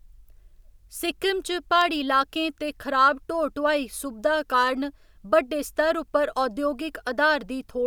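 At 1.81 s a single sharp snap cuts across the speech. It is an electrical switching spike, peaking at about -15 dBFS. The likely cause is a nearby switch, motor or static discharge arcing, with the audio line picking up that burst.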